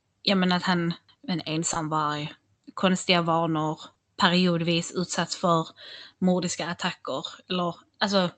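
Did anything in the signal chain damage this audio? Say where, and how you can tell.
Yes, short concealed packet loss on the network: about 20 ms gaps at 1.73 s (after "men att han en") and 3.93 s (after "konstiga vanor"), each filled by continuing the preceding sound, leaving brief smears.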